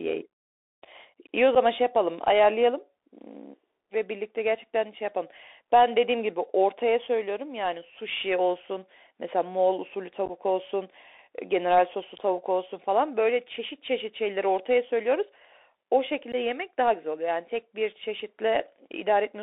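Throughout, the speech carries the Bluetooth CVSD headset codec: a 64 kbps one-bit delta link with the band held to 300 Hz to 3.7 kHz. The adaptive step can't keep pace with fast high-frequency detail, so the damage is plainly audible as scratchy sibilants and a granular hiss.

Unconcealed Bluetooth headset packet loss occurs three times. At 1.55 to 1.57 s, about 7.5 ms drops out, roughly a couple of packets. At 10.26 to 10.31 s, 22.5 ms is lost in scattered gaps over 37.5 ms, the longest 11.2 ms. At 16.32 to 16.35 s, 15 ms goes, a few packets. Each leaves an abrupt-edged hole.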